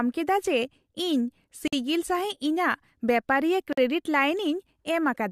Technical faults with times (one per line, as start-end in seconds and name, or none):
1.68-1.73 gap at a join of encoded pieces
3.73-3.77 gap at a join of encoded pieces